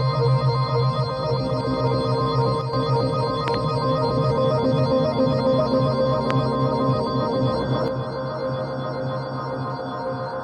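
A stereo channel most likely cuts out, twice, so the mono sum loses half its contribution: from 2.61 to 2.73 s and again from 7.88 s to the end, the shared content drops abruptly by about 6 dB and anything carried only in the lost side vanishes. A likely voltage transient, as from a switch, plug or static discharge, lands on the signal as a loud pop: a double pop from 3.48 to 3.56 s and a single one at 6.31 s, each roughly 15 dB above the surrounding audio, which continues underneath.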